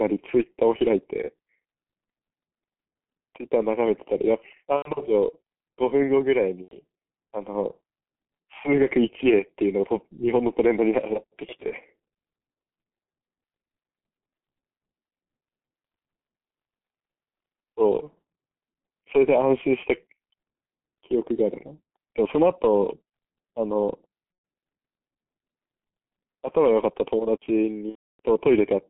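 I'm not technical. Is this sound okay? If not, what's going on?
No. The G.723.1 codec, an early internet-phone compression method, affects the whole clip. It squeezes the speech hard and cuts everything above about 3.5 kHz, so the speech sounds muffled and hoarse, with smeared consonants.

VoIP packet loss concealed by the speech codec occurs at 4.76–4.93 s, 6.62–6.76 s, 24.32–24.44 s and 27.89–28.20 s. Pieces of the call went missing, and the receiver filled each gap by stretching the last sound into a fading buzzy tone or noise. The last gap lasts about a third of a second, so it is the longest.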